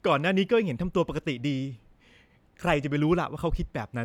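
Speech recording, no technical faults audible: level, timing and signal path hold steady throughout.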